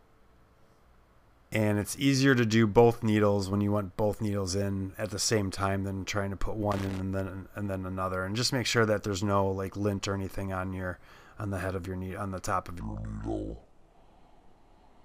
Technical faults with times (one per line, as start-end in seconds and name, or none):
6.72-7.00 loose connector crackle
12.80-15.05 section at the wrong speed